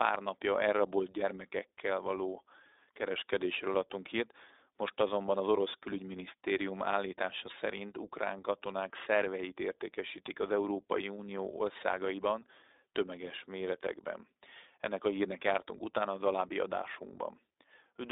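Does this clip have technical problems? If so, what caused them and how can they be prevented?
Yes. The whole clip carries iLBC codec damage: the speech is confined to a telephone band of roughly 300 Hz to 3.7 kHz, with nothing above 3.8 kHz, and has a plainly audible rough, synthetic edge. iLBC codes each 20 ms frame's excitation independently, which fits its 15.2 kbps mode. This frame-by-frame graininess sets it apart from simple telephone band-limiting, which narrows the sound without adding a coded texture. To prevent it, record or transmit with a wideband codec at a higher bitrate instead of narrowband iLBC.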